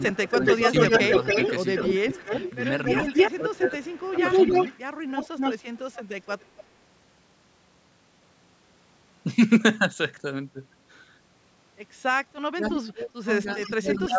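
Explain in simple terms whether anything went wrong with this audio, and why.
Yes, two things went wrong, both typical of a speakerphone call.

The voice keeps ducking or breaking up at 0 to 0.44 s, 1.99 to 2.43 s, 3.36 to 4.54 s and 12.54 to 14.18 s, most deeply in the last two stretches. This is likely speech suppressed in double talk: when both sides spoke at once, the echo canceller turned everything down. Unlike echo, nothing extra is heard; the voice itself goes missing.

A second, delayed copy of the voice trails about 0.3 s behind it from 0.1 to 3.32 s and 4.17 to 6.64 s, fairly strong there, and more briefly at 12.64 to 12.91 s and 13.5 to 13.98 s. This is likely an echo leak, where the far end's loudspeaker sound got back into its microphone and returned. It adds a repeat rather than removing sound.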